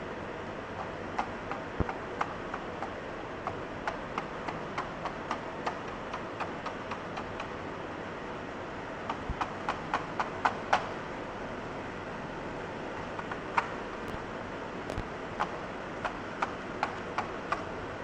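A loud pop hits at 1.80 to 1.84 s, roughly 25 dB above the sound. Double pops follow at 14.08 to 14.18 s and 14.90 to 15.02 s, about 10 and 20 dB up. The likely cause is a voltage pulse from a plug, switch or static. The sound continues underneath.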